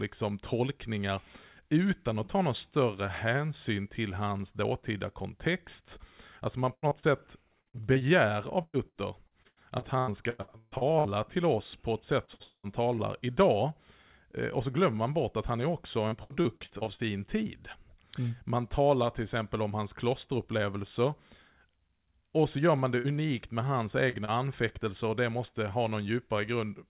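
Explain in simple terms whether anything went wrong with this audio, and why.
Yes, several things went wrong, all from the call's network connection.

Repeated packet loss (robotic sound): from 6.74 to 11.08 s, chunks of the call kept arriving late or not at all, 22 gaps in all, the longest 146 ms. The receiver patched each hole by stretching the previous sound, so the speech turns choppy and robotic just before "till oss på ett". The same thing happens more briefly from 16.09 to 17.02 s, with 8 smaller gaps.

Short concealed packet loss: at 12.25 s, right after "till oss på ett", about 30 ms of audio went missing, and again at 24.10 s and 24.25 s around "med hans" and "anfäktelser och det måste". Each hole was filled with a continuation of the previous sound, leaving a tiny smear or wobble where a sound may drop out.

Burst of packet loss: at 12.34 s and again at 22.99 s, several chunks in a row were lost, about 60 ms each time. 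The receiver held the last sound and faded it, so you hear a short buzz or hiss, then the speech picks up slightly further on.

Long network dropout: from 12.43 to 12.67 s, straight after the first burst, the audio is replaced by a fading buzz or hiss that ends in a brief silence, and about a fifth of a second of speech is lost. The likely cause is the connection stalling completely for that moment.

Throughout, the call's phone-line codec removes everything above 4 kHz, which gives the speech its narrow, telephone-like tone.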